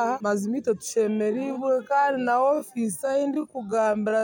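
From 0.93 s to the end, a time-stretched section plays at about 0.62 times normal speed with pitch unchanged. The pace drops abruptly and drags, likely from software lengthening the audio by repeating short segments to fill a longer duration.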